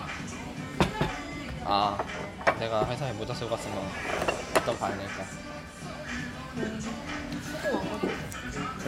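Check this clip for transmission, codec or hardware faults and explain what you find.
I find nothing to explain, as this clip shows no faults.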